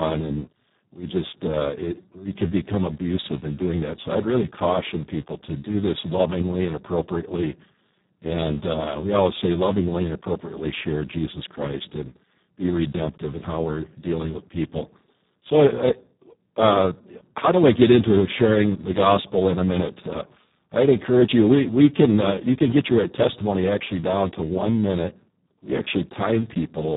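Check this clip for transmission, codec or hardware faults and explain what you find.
There's one fault, and it runs through the whole speech clip: Speex codec damage, and it's heavy. Speex builds speech from a rough model plus a sparse excitation signal, and at this setting there are very few bits left for that excitation, which fits a bitrate down around 4 kbps. So the voice comes out noisy and hoarse. Nothing survives above about 3.8 kHz either, so everything sounds dull and boxed-in.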